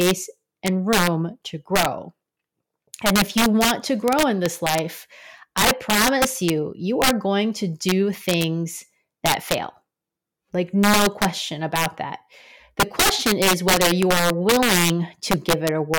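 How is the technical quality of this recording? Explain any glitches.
The recording has one serious fault: integer overflow, present throughout the speech. The signal is driven about 5 dB past the top of the integer range. Instead of being limited, each peak that goes over wraps around to the opposite extreme. Only a small share of samples, under two percent, cross the limit. But every one of them jumps across the full range. The result is violent, sharp cracks on the loudest moments, far harsher than ordinary clipping.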